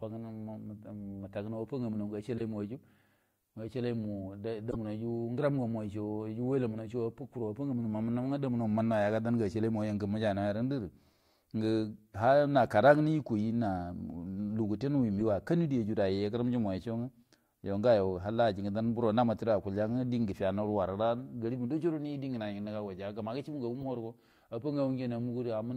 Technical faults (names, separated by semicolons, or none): corrupt frame decoded